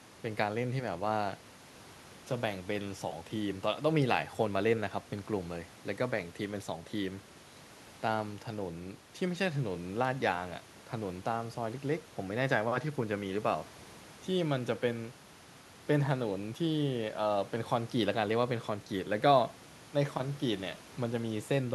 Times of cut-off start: none

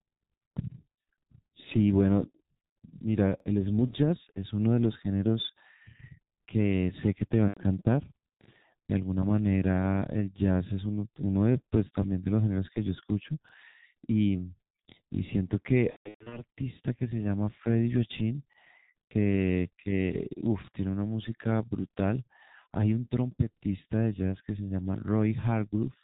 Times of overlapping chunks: 3.40-3.45, 8.45-8.49, 13.49-13.53, 18.53-18.58, 23.58-23.62

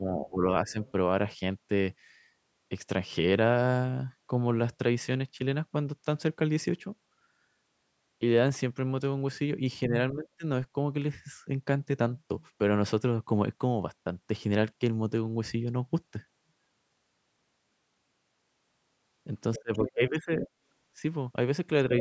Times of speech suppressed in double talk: 0.00-0.79, 9.88-10.44, 19.58-20.47

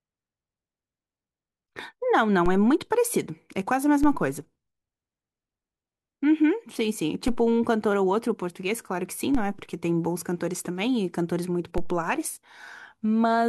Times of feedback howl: none

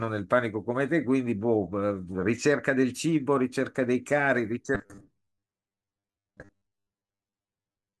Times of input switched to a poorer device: none

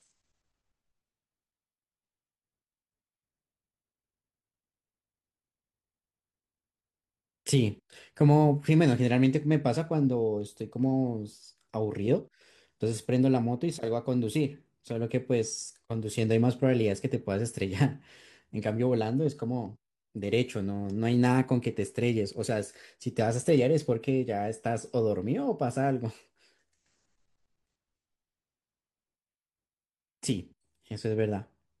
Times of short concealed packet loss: none

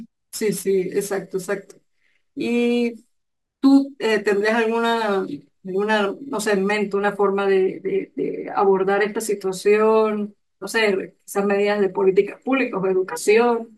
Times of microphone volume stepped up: none

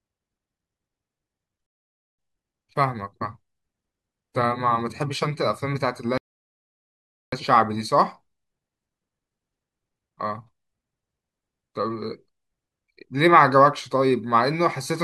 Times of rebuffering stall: 1.66-2.19, 6.18-7.32

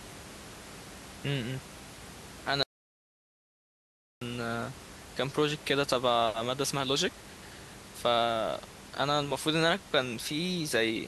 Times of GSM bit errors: none

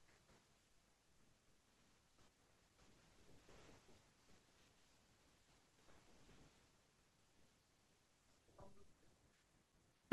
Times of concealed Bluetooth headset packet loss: none

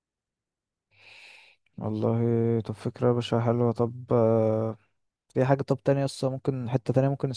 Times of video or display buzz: none

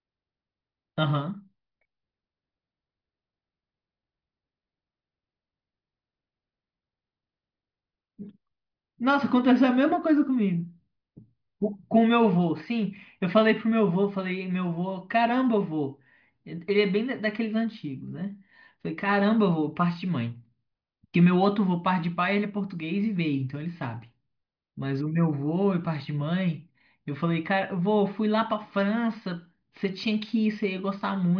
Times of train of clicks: none

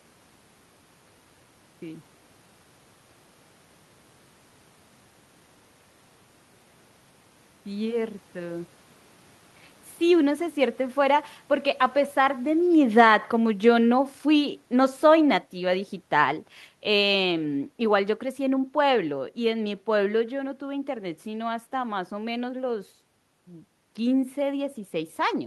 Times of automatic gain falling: 12.17-20.21

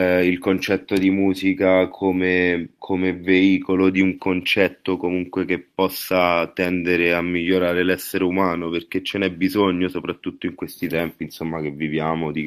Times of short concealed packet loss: none

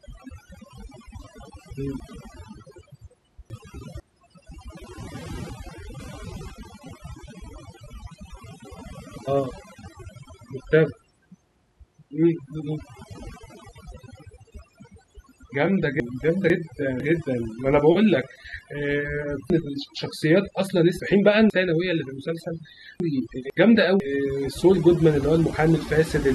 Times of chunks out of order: 2.00-4.00, 5.50-6.50, 16.00-17.00, 19.50-21.50, 23.00-24.00

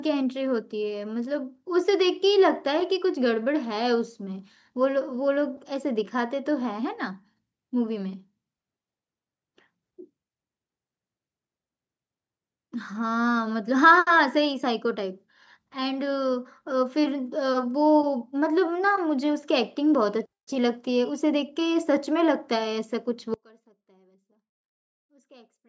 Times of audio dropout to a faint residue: 23.34-25.69

